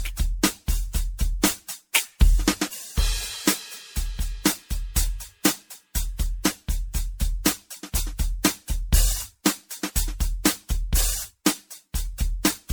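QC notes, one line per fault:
throughout, generation loss: likely repeated MP3 decoding and re-encoding, around fifteen passes at what sounds like 96 kbit/s. Each pass requantises on a shifted frame grid, so noise and spectral holes build into a swirly, hollow smear, with blurred attacks and nothing above 19.9 kHz.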